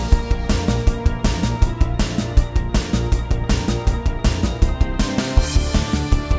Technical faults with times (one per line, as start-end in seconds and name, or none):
none